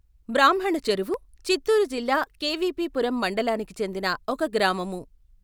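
Speech, with a block of digital silence at 1.14 s. The gap lasts only about 0.31 ms, and the sound cuts out and returns with no fade. That is heard as a single tick rather than a hole, which fits an output buffer that was not filled in time.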